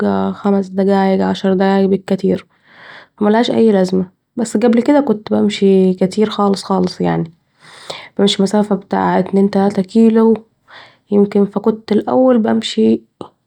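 Nothing stood out as a technical fault on listening to this speech recording.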